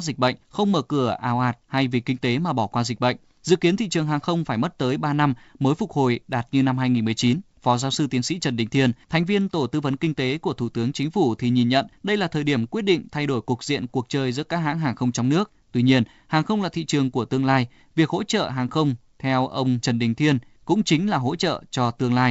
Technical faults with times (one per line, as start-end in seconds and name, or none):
none